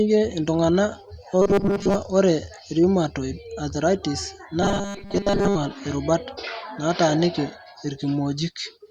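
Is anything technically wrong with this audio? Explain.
Yes. From 1.42 to 1.95 s and again from 4.62 to 5.55 s the speech turns into a rigid metallic buzz at 200 Hz, robotic sound from repeated short buffers. This is likely a 5 ms slice being replayed while most of the real audio is skipped.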